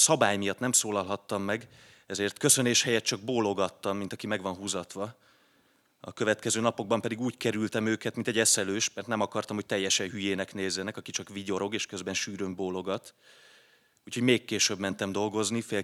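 Nothing is technically wrong with this speech clip.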